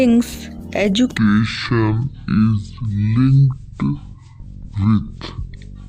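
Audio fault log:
1.18–5.88 s, section at the wrong speed: from 1.18 s to the end the sound runs at about 0.55 times its proper rate. Because speed and pitch move together, everything drops roughly ten semitones and drags, turning deep and sluggish. The likely cause is a stretch played back or conformed against the wrong clock. On a spectrogram, harmonics and formant bands step down sharply at 1.18 s and stay compressed toward the low end, while on the waveform events are drawn out to nearly twice their length.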